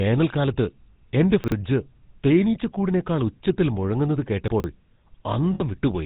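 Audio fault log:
Throughout: GSM full-rate codec. The sound is rebuilt from a vocal-tract model excited by a sparse, regular pulse train. That gives a buzzy, gravelly roughness and a dull top with nothing above 4 kHz, which fits a 13 kbps full-rate stream.
1.44–1.52 s and 4.48–4.64 s: chunks out of order. A 40 ms piece plays late, after material meant to follow it, leaving three hard joins that sound like a jumbled stutter. The first lands one piece late. The second, just after "തേനീച്ചക്കൂടിനെക്കാൾ ഉച്ചത്തിൽ മുഴങ്ങുന്നത്", arrives about three pieces late, so it sounds longer.
5.54–5.62 s: lost GSM frames. For about 60 ms the decoder repeats the last good frame's settings, holding the sound as a rough, metallic ring. That fits roughly three consecutive 20 ms frames being lost.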